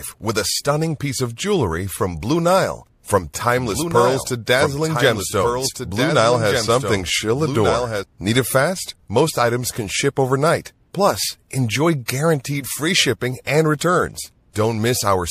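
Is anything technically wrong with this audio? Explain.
Yes. From 3.6 to 8.0 s there is a doubled audio track, likely from the same speech being captured a second time by a slower path. A full-band copy, about 5 dB quieter, trails roughly one and a half seconds behind, with no reverb, and cuts in and out abruptly.

There is also pre-echo, from a transform codec that appears never to switch to short blocks and spreads quantisation noise across a long window, which fits about 36 ms. Just after "enjoy guaranteed free shipping" (13.45–13.47 s) and after "guaranteed free shipping and" (13.79–13.81 s), hiss rises about 13 dB and about 21 dB over roughly 23–24 ms before each attack, smearing it.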